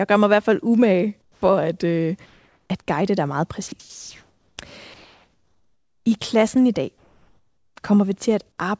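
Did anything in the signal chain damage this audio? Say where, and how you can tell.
Yes, in call processing. Comfort noise in place of the background at 1.22–1.42, 2.26–2.70, 3.80–4.58 and 6.98–7.76 s: the room tone turns flat and featureless, about 12 dB quieter in the first gap. That's likely discontinuous transmission filling the pauses.

Just after "at guide dig meget", at 3.68–3.72 s, about 30 ms of sound gives way to that same noise. That's likely sound dropped by the voice detector, which mistook live audio for background.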